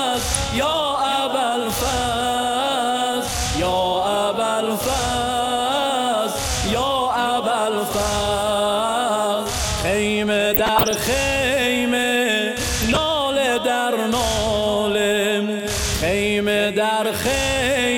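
DAB burbling at 0.33–0.46, 10.54–10.95 and 12.80–12.97 s: bit errors slipping past error correction scramble sub-band levels frame by frame, giving short noise blips over the sound.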